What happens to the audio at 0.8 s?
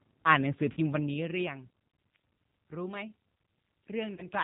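At 0.8 s the sound is just coming out of a short dropout. VoIP packet loss concealed by the speech codec runs from about 0.73 to 0.79 s. Roughly 40 ms of audio went missing, which fits two lost 20 ms packets. The decoder filled the gap by repeating its last pitch and filter settings with falling gain. That gives a brief buzzy tone or coloured noise that fades. Each frame depends on the one before, so the sound at 0.8 s is still weak or distorted as the decoder recovers.

Throughout the clip, including this moment, the speech carries the G.729 codec at 8 kbit/s. The codec rebuilds each 10 ms frame from a vocal tract model, a pitch predictor and a few pulses. Nothing above 4 kHz survives, so the sound is dull and band-limited. The damage is plainly audible. It gives a rough, synthetic edge, and any background noise warbles.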